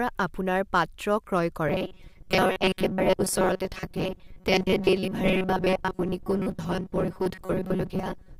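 From 1.68 s to the end, the speech turns into a rigid, metallic 188 Hz buzz: robotic sound from repeated short buffers, likely a roughly 5 ms chunk repeated over most of the audio, showing as evenly spaced harmonic stripes and a periodic waveform.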